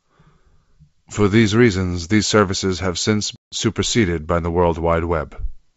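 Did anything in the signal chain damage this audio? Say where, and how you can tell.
Yes, at the network stage. Right after "these services have since", the speech drops into a hard-edged silent hole from about 3.36 to 3.55 s, with roughly 160 ms of audio missing, which points to a run of several lost packets on an ADPCM call. What separates this from a buffer underrun or an edit is the return: the G.722 decoder's adaptive predictor and step size have drifted from the sender's, so the speech comes back slightly distorted before settling within a few tens of milliseconds.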